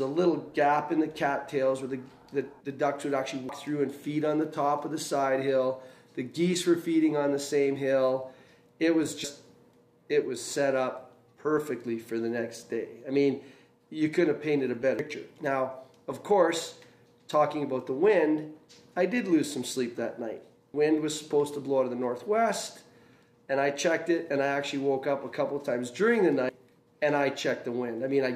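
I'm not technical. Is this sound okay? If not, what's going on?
No. The sound skips forward five times, at 3.49, 9.24, 14.99, 20.74 and 26.49 seconds, each time losing about a third of a second. This is audio missing between chunks. The likely cause is the recorder handling the sound in pieces of about six seconds and dropping a bit at each handover. Unlike a dropout, there is no silent gap: the sound simply jumps ahead, and the jumps come at a steady rhythm.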